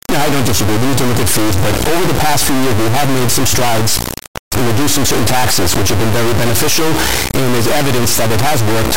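From start to end, 32-bit integer samples are decoded as 32-bit float: an integer read as float fault. The resulting values are either near zero or far past full scale, so the speech turns into a harsh, extremely loud buzzing square wave that drops to silence in the quietest passages.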